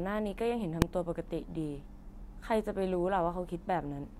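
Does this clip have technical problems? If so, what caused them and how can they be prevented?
Yes: there's one sharp bang at 0.82 s, invalid numbers at full scale. A bad calculation pinned about 1.45 ms of output to one extreme, which fits a 64-sample block. Checking for NaN or infinite values before output would prevent it.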